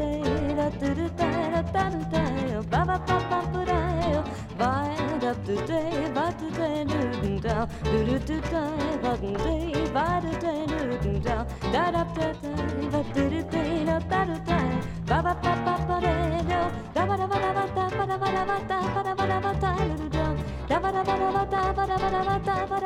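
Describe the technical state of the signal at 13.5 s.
The signal at 13.5 s is intact, with no dropout, distortion, glitch or other technical fault audible at that moment.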